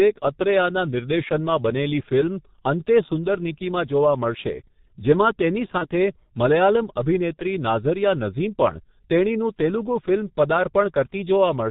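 Speech carried over a G.723.1 codec throughout, with heavy codec damage. Everything above 4 kHz is missing, so the voice is muffled. The slow update of the codec's vocal-tract model leaves a hoarse, rough texture and smears consonants together. The coarseness fits the low-rate 6.3 kbit/s mode working in 30 ms frames.

VoIP packet loss concealed by the speech codec occurs twice, at 5.78 to 5.86 s and at 7.35 to 7.40 s. Each event is consistent with a single lost 30 ms frame. The decoder filled the gap by repeating its last pitch and spectral envelope at falling gain, which produces a brief buzzy tone or coloured noise in place of the missing sound. Because each decoded frame depends on the one before, the voice stays weak or distorted after the gap, so each disturbance lasts well beyond 30 ms.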